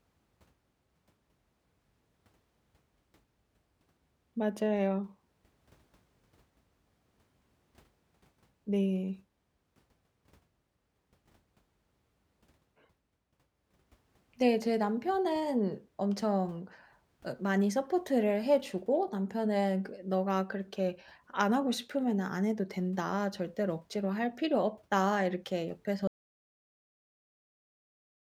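At 26.07 s the speech cuts off mid-flow in an audio dropout to silence. The signal falls to silence and stays there until the end, a little over 2 s later. No room tone or background noise remains in the gap. The likely cause is a lost input, such as a disconnected device, a failed link or an accidental mute, while the recorder kept writing empty samples. Whatever was said after the cut is gone.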